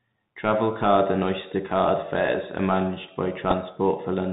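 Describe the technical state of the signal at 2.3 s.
At 2.3 s the speech is still passing through the Bluetooth CVSD headset codec that colours the whole clip. A one-bit up/down coder with adaptive steps leaves a spectrogram empty above 4 kHz with a grainy noise floor, and waveform peaks on s sounds are slope-limited and jagged.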